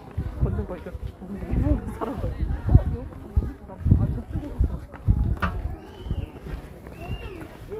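Nothing in this recording of everyday sounds stands out as a technical fault at any point.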